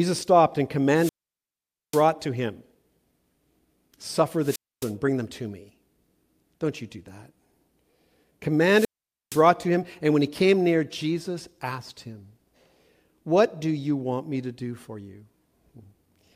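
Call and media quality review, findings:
Hiss swell, then near-silent hole, speech returning: 0.94–2.07 s (after "stopped and", muted about 0.85 s, back at "to him"); 4.40–4.94 s (about 0.27 s, before "bring them to me"); 8.65–9.48 s (about 0.47 s, before "to him and when"). Wireless microphone squelch dropout: FM link fading, receiver squelch muting output.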